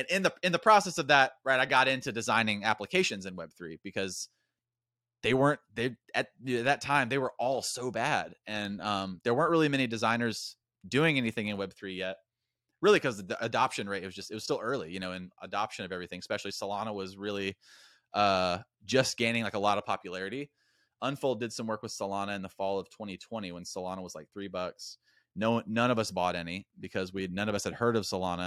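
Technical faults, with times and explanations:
No technical faults can be heard anywhere in this speech recording. There is nothing here to time or explain.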